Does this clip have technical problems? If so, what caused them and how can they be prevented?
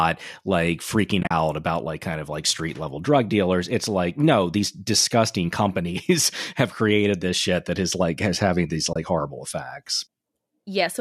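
Yes. The clip has AAC frame loss with muting. From 1.21 to 1.31 s, just before "about like kind of", about 70 ms of sound drops out in short gaps scattered over 100 ms. The longest gap is around 40 ms. From 8.93 to 8.96 s, just after "like has having these", a further 30 ms goes silent. Each lost frame was replaced with silence. The overlapping windows fade the sound out and back in, so each hole has soft edges. The sound points to short 10 ms frames from a low-delay codec, likely AAC-ELD. Prevent this with forward error correction or packet retransmission, and with a larger jitter buffer on the receiving side.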